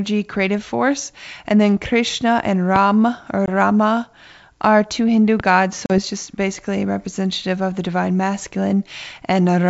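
This is a speech clip carried over what sounds like a G.722 wideband call, with clear wideband speech that fits the full 64 kbit/s mode. There are two loud pops, at 2.76 to 2.78 s and again at 5.40 to 5.42 s. Each is a single sharp hit peaking about 15 dB above the speech, with the talking carrying on underneath. That sudden pulse riding on top of the signal most likely comes from a voltage spike such as a switch, static or a driver glitch. The other problem is packet loss on an ADPCM call. At 3.46 to 3.49 s there's a hard-edged 20 ms hole, about one packet's worth. At 5.86 to 5.99 s there's a 40 ms gap, roughly a couple of packets, just before "just basically representative of". After each hole the decoder's predictor and step size no longer match the sender's, so the speech comes back slightly distorted before it settles.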